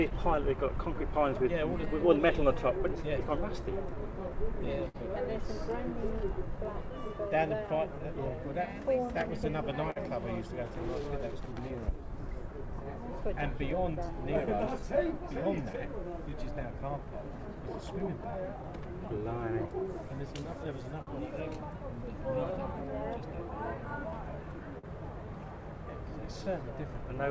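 From start to finish the tempo feels faintly unsteady, with small hiccups at uneven spacing. This is clock drift between sender and receiver: the sending clock runs roughly 4% slow, so the receiver's jitter buffer keeps draining and must be topped up.

From 0.10 s to 18.02 s, around thirty brief ticks and smears are scattered through the sound, none longer than about 50 ms. These are scattered short gaps: late or lost packets, each patched by extending the preceding sound, totalling only a few hundred milliseconds. A second, smaller cluster of about four such gaps falls between 21.02 s and 24.85 s, adding roughly 100 ms of patched audio.

Running from 0.19 s to 27.15 s, the audio drags slightly, playing at 97% speed with short stretches repeated. These are repeated timing corrections: the receiver adds snippets, around 700 ms in all, to keep pace with the slower sender. The audio itself arrives over a G.722 call path at 64 kbps, which leaves nothing above 8 kHz.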